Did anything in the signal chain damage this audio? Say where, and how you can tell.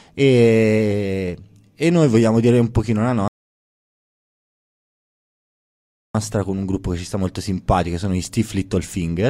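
Yes, at the playback stage, where a rebuffering stall interrupts the speech from 3.28 s to 6.15 s. The audio drops to silence for 2.87 s and then picks up exactly where it left off, with nothing missing on either side of the gap. That tells you the player's buffer ran dry: it halted output while waiting for more downloaded data, then resumed, so the clip gains time rather than losing content.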